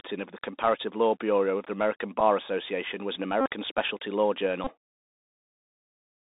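Speech heard through a Bluetooth CVSD headset codec: the band runs only from about 200 Hz to 3.7 kHz, with a granular hiss under the voice and scratchy, slope-overloaded sibilants. That grain sets it apart from a clean telephone band-limit, and it fits the 1-bit, 64 kbps delta coding. Bluetooth headset packet repeats occur at 2.20–2.22 s, at 3.41–3.50 s between "was an" and "specialty law", and at 4.64–4.72 s after "specialty law", spanning about 7.5, 48.8 and 22.5 ms. Reused packet bits give a short buzz near 267 Hz rather than the silence of a plain dropout.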